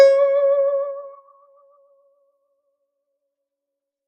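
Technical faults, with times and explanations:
Throughout: noise suppressor applied to music or sounds. The music's level swells and sinks as if gated, with losses swinging by around 20 dB. A speech-tuned noise suppressor left running treats sustained musical content as noise and keeps turning it down.
1.19 to 2.70 s: sound cut by the noise suppressor. For roughly a second in total within this span, the music sinks, dropping by as much as about 11 dB. The suppressor misjudged this passage as noise and attenuated it harder than the surrounding material.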